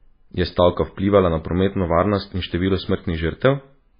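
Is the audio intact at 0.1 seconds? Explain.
No, at 0.1 s the speech already carries MP3 compression damage, which runs through the whole clip. Nothing comes through above 5 kHz, and the heavy swirly, watery texture points to a very low bitrate of roughly 17 kbps. The likely cause is an encoder starved of bits: it drops the treble at a fixed cutoff and zeroes weak frequency lines that flicker on and off between frames, so sibilants chirp metallically and onsets smear.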